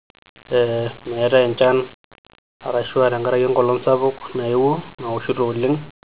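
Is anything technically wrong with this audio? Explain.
No, nothing technically wrong can be heard here.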